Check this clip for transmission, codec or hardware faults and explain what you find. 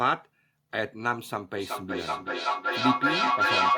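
One fault is present: feedback echo between two devices, from 1.57 s to the end at 3.78 s. One device's loudspeaker feeds the other's microphone, which its own echo canceller cannot remove. The speech returns roughly every 0.4 s, thinner and ringing, and builds to about 4 dB above the speech instead of fading. A spectrogram shows evenly spaced copies stacking up, and the waveform envelope swells rather than decays.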